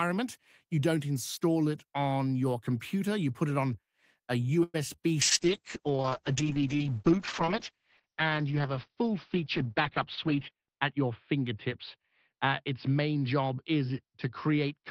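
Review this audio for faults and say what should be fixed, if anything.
At 4.63 to 4.76 s there is a call audio freeze. Packets were most likely held up in transit and the jitter buffer ran dry. The receiver stretched the last sound into a fading buzz lasting 105 ms, ending in about 20 ms of silence. Playback then resumed where it had stopped, so nothing was lost, but the delay grew by 105 ms. Preventing this means fixing the network path's delay spikes, or giving the jitter buffer enough headroom to ride them out.

Two short concealed packet losses follow, at 4.96 to 5.00 s and 5.02 to 5.06 s. Each time, about 20 ms of audio never reached the decoder in time. The receiver extrapolated from the preceding sound and blended back into the real audio, which leaves two brief smears in close succession. Forward error correction or redundant packets would let the decoder rebuild these short holes.

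A call bitrate drop starts at 5.22 s and lasts to the end. The bandwidth estimate collapsed and the encoder fell from 32 kbps to 7 kbps, staying at the lowest rate for about 5.5 s. The coding turned coarse and the audio bandwidth narrowed from 20 kHz to 4 kHz, so the sound becomes muffled and rough. Better congestion control, with faster recovery of the estimate, would stop the rate from sinking this far and staying down.

From 10.27 to 10.66 s there is a jitter buffer speed-up. The buffer was holding more audio than its target, so the receiver cut out short pitch-period slices repeatedly, about 50 ms in total. As a result the sound runs at roughly 110% speed with its pitch unchanged and comes across as hurried. Draining excess buffer more gradually, or keeping packet delivery steadier, would avoid this audible acceleration.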